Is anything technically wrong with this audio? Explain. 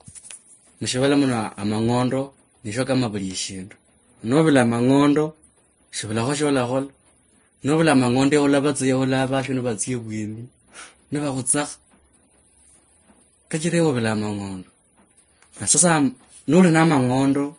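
Yes. Across the whole clip the speech carries the stacked damage of transcoding between lossy codecs, likely an MP3 encode at around 46 kbit/s later re-encoded as Vorbis at about 32 kbit/s. The second encoder wastes its scarce bits reproducing the first one's artefacts while adding its own, so the different artefacts of both codecs are heard together. Nothing survives above 10.6 kHz.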